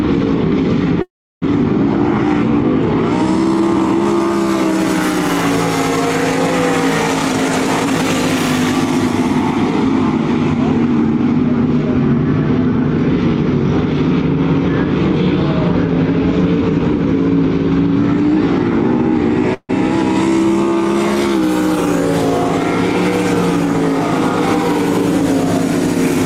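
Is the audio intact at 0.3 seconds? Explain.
Yes, at 0.3 seconds the audio runs intact, with no dropout, click, distortion or other fault at that moment.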